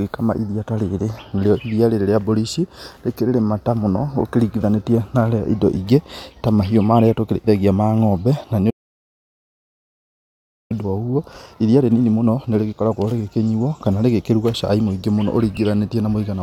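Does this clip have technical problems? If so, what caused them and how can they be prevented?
Yes. A playback stall cuts the speech off mid-flow at 8.70 s, leaving about 2 s of silence until 10.72 s. The likely cause is that the player ran out of buffered data or its thread was blocked. On a waveform this is a flat line, and on a spectrogram a blank vertical band with hard edges. A larger jitter buffer and a playback thread that cannot be starved would prevent it.

Time-compressed catch-up follows from 10.72 to 13.72 s. The player removes small slices and cross-fades the joins to clear its backlog, so the speech runs about 1.1 times faster at unchanged pitch. A spectrogram shows harmonics at their normal spacing but syllables packed closer together, with occasional smeared seams. Preventing the stall removes the need for catch-up, and a gentler speed-up spread over a longer span would make it less noticeable.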